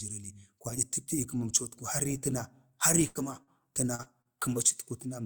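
At 3.07 s a burst of packet loss drops about 80 ms of speech; the receiver stretches and fades the last sound until 3.18 s before speech resumes. Short concealed packet losses of about 40 ms each follow at 3.43, 3.95, 4.03 and 4.22 s, where extrapolated filler briefly smears or wobbles the speech.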